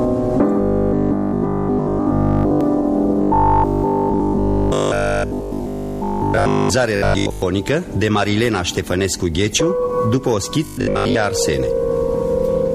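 From 0.61 to 2.61 s and 3.22 to 6.70 s, then briefly at 6.96 to 7.42 s and 10.65 to 11.15 s, robotic sound from repeated short buffers: a rigid metallic buzz at 50 Hz, likely from a 20 ms stretch being looped while incoming audio is skipped. The first two passages are almost entirely replaced; the later two, mostly. Unlike 50 Hz mains hum, this buzz rises and falls with the sound's loudness rather than sitting steadily underneath.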